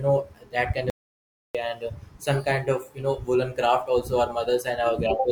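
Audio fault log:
0.90–1.55 s, audio dropout to silence: right after "know that kind" the speech just stops dead, and for about 0.65 s there's pure silence, not even room tone, before it picks back up mid-flow at "and uh some kind". That flat silent gap means the input itself went away while the recorder kept writing, likely a momentary disconnect, link failure or accidental mute, so whatever was said in that stretch is simply gone.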